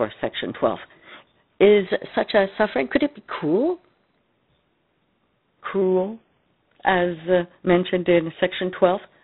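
It's a speech clip, and the whole thing has gone through G.726 ADPCM coding. Rather than storing each sample, the codec sends a few bits describing how far the signal strays from its own adaptive guess. The damage is plainly audible: a coarse, rasping hiss that rises and falls with the speech level, which fits the 24 kbit/s mode. Nothing above about 3.8 kHz gets through either, so the top end sounds boxed in. Then from 1.87 to 4.17 s there's a drift correction step. Speed and pitch jump together, with the playback running 6.3% off and the pitch shifted by about 106 cents, roughly a semitone, before snapping back. That's likely clock-matching software nudging the playback rate in one go to refill or drain its buffer, rather than easing it gradually.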